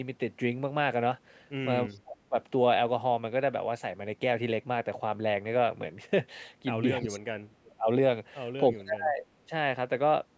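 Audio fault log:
1.87–1.99 s, echo leak: a very faint copy of the speech returns about 310 ms late, likely from a loudspeaker end whose echo canceller let some residue through.
1.88–2.37 s, 6.98–7.88 s, 8.72–9.27 s, speech suppressed in double talk: the talker's level drops by roughly 30 to 35 dB in pieces, likely because the canceller turned down both its own talker and the loudspeaker echo during overlapping talk.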